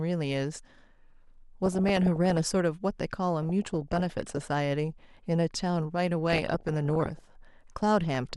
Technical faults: DAB burbling

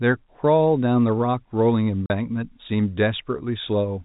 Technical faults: packet loss filled with silence

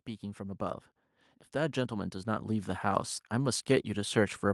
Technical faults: automatic gain rising

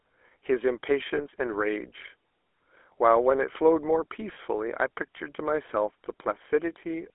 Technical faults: GSM full-rate codec; lost GSM frames

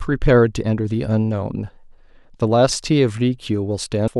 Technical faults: compressed frames skipped

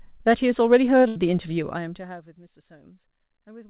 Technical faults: burst of packet loss; zipper noise

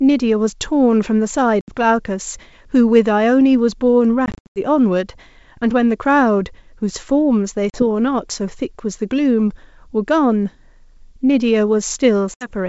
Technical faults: packet loss on an ADPCM call

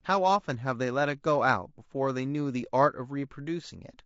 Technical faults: low-delay AAC compression

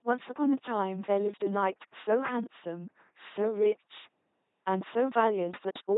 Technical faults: LPC-10 vocoder

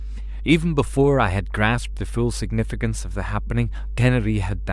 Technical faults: mains hum

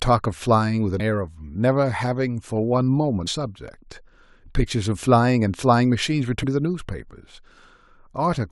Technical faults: damaged data in a compressed stream

